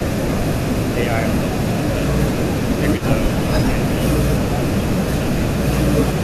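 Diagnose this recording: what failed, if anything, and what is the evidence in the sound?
Call processing, echo leak: the far end's echo canceller likely failed to remove its loudspeaker pickup, so a delayed copy of the speech returns about 327 ms behind, from 0.0 to 0.95 s at about 20 dB down and from 1.31 to 6.23 s at about 15 dB down.

Call processing, speech suppressed in double talk: unable to tell the local talker from the leaking echo, the canceller likely ducked both. The speech drops by roughly 10 dB at 0.13–0.44, 0.93–2.07, 2.67–4.0, 4.43–4.52, 5.04–5.43 and 5.89–5.94 s.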